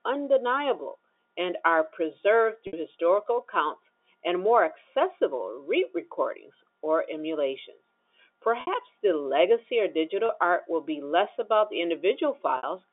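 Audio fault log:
2.67 to 2.73 s, 8.61 to 8.67 s, 10.26 to 10.29 s and 12.57 to 12.63 s: packet loss with pitch repetition. These are short gaps in the stream: 60 ms for the first, second and fourth, consistent with two 30 ms packets, and 30 ms for the third. The first comes after "undeniable and are preserved", the second just before "the legacy of", and the third right after it. The receiver covers each hole by replaying the last pitch cycle, so the sound briefly holds a buzzy tone before normal audio resumes.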